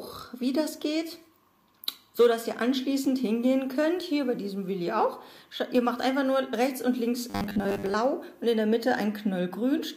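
From 7.30 to 7.94 s the sound collapses into robotic sound from repeated short buffers: a stiff, metallic 100 Hz buzz over most of that stretch. That pitch fits a 10 ms chunk being looped, likely because fresh audio stopped arriving and the gap was papered over.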